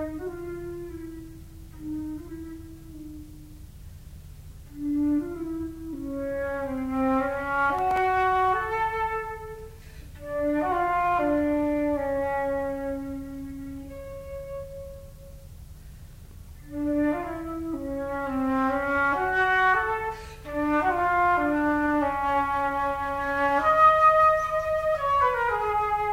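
A brief gritty crackle tears across the sound from 7.75 to 7.98 s, and a denser burst follows from 16.11 to 16.37 s. Both are processor overload crackle. The processor fell behind on very short buffers, around 1.5 ms each, and missed a run of deadlines in a row: a handful in the first burst and roughly twice as many in the second. Each miss dropped in a sliver of silence with hard edges, and the string of tiny gaps merges into the crackle.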